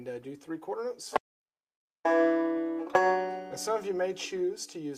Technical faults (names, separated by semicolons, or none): audio dropout to silence